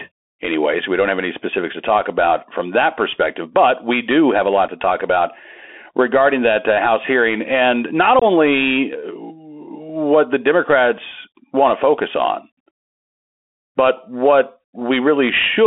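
From the start, the speech carries the Bluetooth CVSD headset codec: one-bit delta coding over a 250 Hz–3.5 kHz line band, so s sounds turn scratchy over a granular hiss. A spectrogram shows nothing above 3.5 kHz, with grainy noise filling the band.

At 4.68 s, unconcealed Bluetooth headset packet loss cuts a 7.5 ms hole with abrupt edges, about one packet's worth. At 8.19 s a 22.5 ms gap, roughly three packets, drops out and the speech returns briefly quieter. Both appear as sharp-edged vertical blanks in the waveform.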